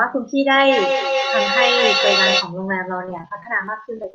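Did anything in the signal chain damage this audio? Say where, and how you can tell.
Yes. From 0.51 to 2.55 s there's feedback echo between two devices: the speech comes back roughly every 200 ms, with repeats up to about as loud as the original. That points to a second device in the room replaying the call, which the first device's echo canceller doesn't remove.

From 3.05 s to the end of the speech, repeated packet loss makes it choppy and robotic. There are 15 short holes, none longer than 22 ms, which points to the network. The jitter buffer patches each hole by stretching the last sound, and about 17% of that stretch ends up concealed.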